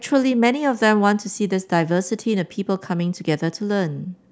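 Listening to this short speech recording, nothing technical stood out at any point.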